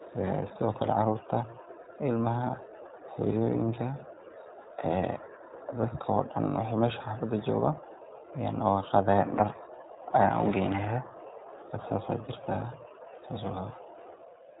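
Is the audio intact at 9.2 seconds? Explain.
No. At 9.2 seconds, as throughout, the speech has passed through the iLBC codec. Each frame's excitation, which fits 20 ms frames at 15.2 kbps, is coded on its own, and nothing above 3.8 kHz survives, leaving the voice muffled, rough and plainly synthetic.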